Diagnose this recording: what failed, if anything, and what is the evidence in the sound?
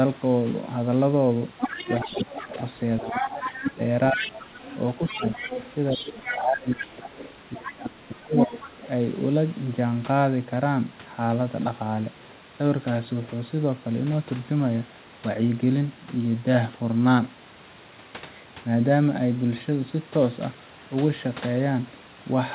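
The other side's voice leaks through at 1.59–2.46 s (about 10 dB under the talker), 3.09–7.72 s (about 5 dB under) and 8.37–8.88 s (roughly equal). The call's echo canceller likely left loudspeaker echo in the microphone. Unlike steady wiring crosstalk, it follows the far-end talk.

Speech is suppressed in double talk between 2.05 and 8.51 s. The talker's level dips by up to about 20 dB, for roughly 4 s in total, while the leaked voice plays. The echo suppressor likely turned both down together. A network dropout would cut cleanly instead of tracking the other voice.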